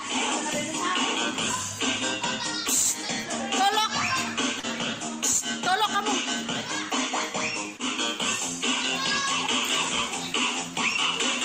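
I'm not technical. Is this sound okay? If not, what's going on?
No, not quite. There's short concealed packet loss at about 4.59 to 4.65 s and again at 7.77 to 7.81 s. Tiny chunks of audio, 40 ms and then 20 ms, arrived too late, so the receiver patched each gap by stretching the preceding sound, leaving a brief smear or wobble.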